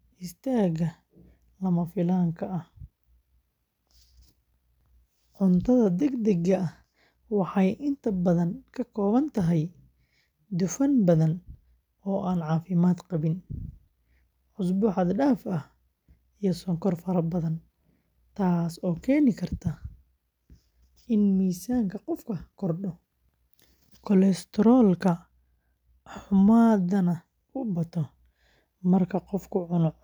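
Listening to the speech recording, nothing stood out as a technical fault at any point.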